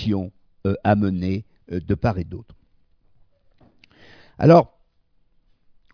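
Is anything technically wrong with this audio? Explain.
No, no technical faults detected.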